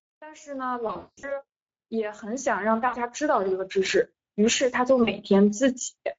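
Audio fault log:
throughout: Speex codec, plainly audible damage at about 16.8 kbps. The excitation is starved of bits, so speech comes across noisy and hoarse.
0.2 to 4.05 s: automatic gain rising, about 14 dB. The AGC decided the input was too quiet and slowly turned it up, so voice and background swell together.
4.71 to 5.87 s: automatic gain rising again, gentler this time at about 3 dB, with the same slow lift of everything in the mix.
0.87 to 1.3 s, 2.87 to 2.97 s, 5.03 to 5.12 s: VoIP packet loss concealed by the speech codec. The decoder stretches the last pitch and filter into a fading buzz or coloured noise. The first gap is the worst, about 280 ms lost with a 200 ms run, and the voice stays weak a little after it.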